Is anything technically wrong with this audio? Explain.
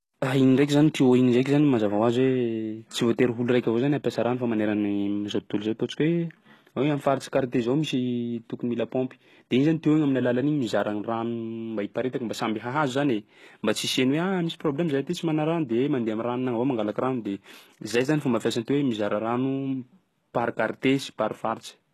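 Yes, the speech has clear HE-AAC compression damage throughout, likely from a very low bitrate around 16 kbps: nothing above 12.3 kHz, rebuilt treble, and gritty, lispy s sounds.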